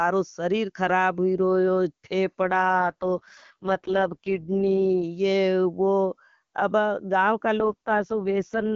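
At 2.43 s the speech turns rough and synthetic, the classic AMR rate drop, which fits the wideband codec stepping down from 23.85 to 6.6 kbit/s to protect a weak link. Bandwidth holds, no gap. It clears at 5.04 s, then roughens again from 7.59 s to the end.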